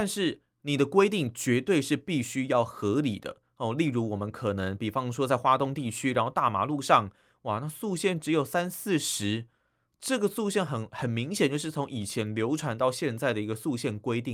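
No technical faults can be heard in the speech. There is nothing at any moment of the recording that calls for a time or a note.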